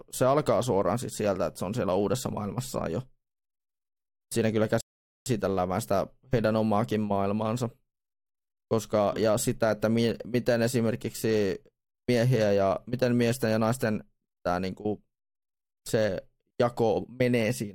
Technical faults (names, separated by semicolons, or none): rebuffering stall